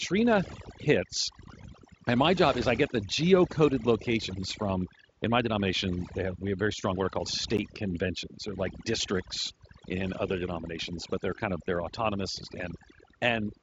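From start to finish, the speech carries the marks of overdone noise removal. The reducer was pushed too hard. Any frequency band sitting near its noise estimate gets pulled down or switched off, and the softer parts of the voice are taken along with it. Between phrases the background drops and breaks up into twinkling specks. The top of the band stops near 7.7 kHz, as the Speex coding allows.

At 7.57 s there is a block of digital silence lasting about 11.6 ms. The audio cuts out and back with no fade, and the block registers as a brief tick or dip. The length fits a 512-sample buffer that was not filled in time. A second, shorter drop comes at 11.67 s, about 5.8 ms long, which fits a 256-sample block. It is heard as a tick.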